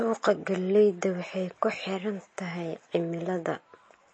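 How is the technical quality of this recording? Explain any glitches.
The recording has one fault that runs the whole way through: heavy MP3 compression, likely at a low bitrate, which fits about 32 kbps. Starved of bits, the encoder cuts everything above 8.3 kHz and drops weak frequency components that flicker between frames, so the speech sounds dull, watery and swirly throughout.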